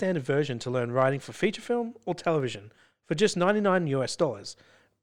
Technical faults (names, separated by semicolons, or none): dropped samples